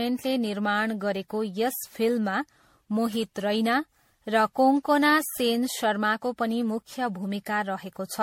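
Speech runs through all of it with generation loss: the sound is swirly and hollow, consonant attacks are smeared, and the coarse, watery texture is heavier than one encode would leave. The likely cause is repeated re-encoding, around ten passes, with a character that fits 64 kbit/s MP3. A spectrogram would show a hard ceiling at 16.5 kHz, patchy holes and flickering blocks in the upper bands, and blurred onsets instead of sharp vertical edges.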